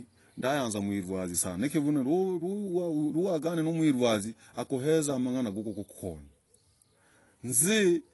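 The speech was most likely squeezed through AAC compression at a low bitrate, with the AAC-LC encoder discarding detail its hearing model judged expendable to fit a tight budget, which fits a rate around 32 kbps. Throughout the clip, nothing survives above 11.5 kHz, so the top of the speech band is cut away and the sound loses air and crispness. The coding damage is plainly audible, leaving the sound dull and smeared.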